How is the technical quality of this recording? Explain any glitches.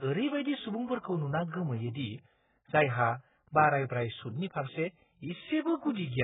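Technical quality is poor throughout. The speech sounds dull and smeared, with nothing above 3.8 kHz and a warbling, fizzy texture, likely heavy AAC compression at a very low bitrate, around 8 kbps.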